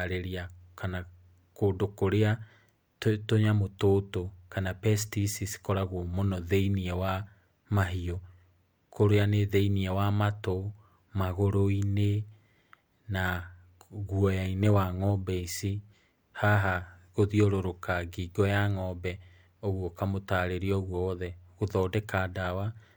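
No technical faults are audible.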